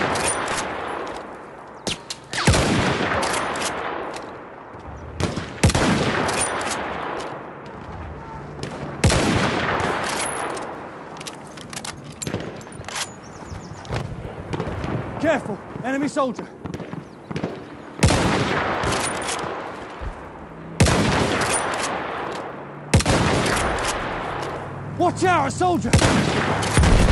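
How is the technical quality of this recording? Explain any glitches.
The recording is flawed from 9.25 s to the end. The resampler restarts on every block: each 250 ms block was converted from 24 kHz to 48 kHz independently, so the block edges carry errors. These sound like steady 4 Hz ticks while signal plays and appear as thin vertical spectrogram lines every 0.25 s.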